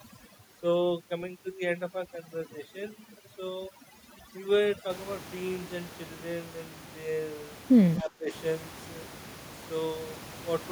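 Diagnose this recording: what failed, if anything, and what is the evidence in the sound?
Overdone noise removal in the call-processing stage runs from 0.0 to 4.9 s. Noise reduction set too aggressively gates off any band near its noise estimate, so the background drops and breaks up into twinkling specks. On a spectrogram, the noise floor is blacked out, isolated musical-noise dots are scattered through it, and the harmonics look ragged and full of holes.

From 8.02 to 8.29 s the speech level dips by roughly 15 dB over about 300 ms. This is likely speech suppressed in double talk: with both sides talking, the echo canceller mistook near-end speech for loudspeaker echo and attenuated it. The waveform shows an abrupt notch in the envelope, and the spectrogram shows a brief dimmed band.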